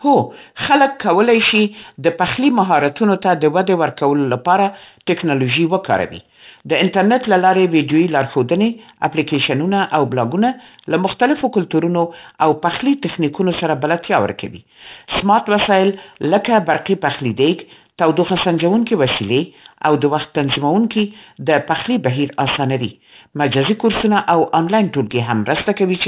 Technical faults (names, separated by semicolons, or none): aliasing